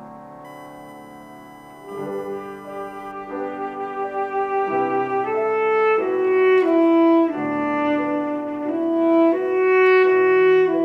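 From 0.45 s to 3.12 s, a USB whine sits under the sound. It is a thin, steady tone at 1 kHz, about 25 dB below the audio. The bus draws current in 1 ms frames. That pulsing leaks in through power or ground.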